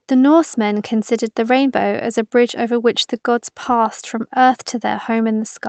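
No technical faults can be heard anywhere in the speech. It has come through a call codec, most likely Opus at a modest bitrate around 24 kbps, which limits the audio band to about 8 kHz and adds its usual coding noise.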